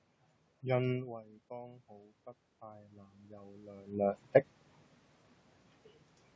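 Speech, with automatic gain rising: the gain control lifts about 6 dB from 0.87 to 4.26 s, swelling voice and room noise together.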